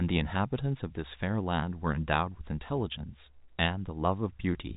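No technical faults are audible.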